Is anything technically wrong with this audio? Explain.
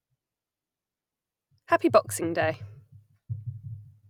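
No, nothing technically wrong turns up here; the speech comes through without any problems worth pointing out.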